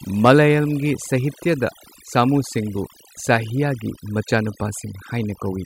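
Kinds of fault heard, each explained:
Overdone noise removal: noise reduction set far too hard strips out any frequency band close to the estimated noise floor throughout this speech, leaving near-silent gaps with twinkling specks; a spectrogram shows scattered isolated blobs between dark, emptied regions.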